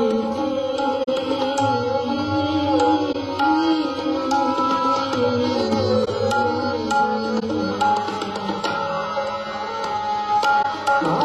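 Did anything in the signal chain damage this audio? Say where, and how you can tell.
Yes, at the codec stage. There's corrupt frame concealment in five places: 1.03–1.09 s, 3.12–3.16 s, 6.03–6.09 s, 7.38–7.43 s and 10.62–10.65 s. Each is a short stretch, 35 to 65 ms long, which fits one to three damaged AAC frames. The decoder caught the bad bits and covered those frames itself.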